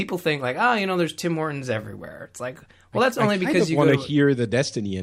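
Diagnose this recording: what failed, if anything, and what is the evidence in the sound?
Nothing failed, and there is no evidence in the sound of any fault at any stage of the recording.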